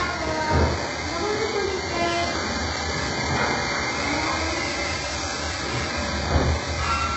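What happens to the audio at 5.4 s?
At 5.4 s the audio carries the same damage heard across the whole clip, which is likely HE-AAC compression. The upper range sounds synthetic, gritty and metallic, because the treble is rebuilt from copied lower bands rather than carried through, so its harmonics don't line up with the lower part. Nothing reaches above 8 kHz, and the heavy damage points to a very low bitrate, around 8 kbps. A plain low-pass cut would sound dull, not synthetic like this.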